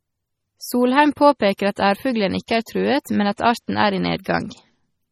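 All the way through, the speech has that watery, swirly quality, with s sounds going metallic and chirpy. The sound is hard-cut at 15.8 kHz, and weak detail seems to flicker in and out between frames. That's heavy MP3 compression damage, likely from an encoder starved of bits, which fits a low bitrate around 32 kbps. It drops the treble and keeps switching off quiet frequency lines to cope.

On top of that there's pre-echo at about 1.58, 2.47, 2.66 and 3.37 s. Each time, a short hiss sneaks in roughly 12 to 19 ms ahead of a sharp onset, and the attack itself comes out soft and smeared. The codec spreads its noise across a whole block, so when a hit lands late in the block, noise sized for the loud part leaks into the quiet moment just before it.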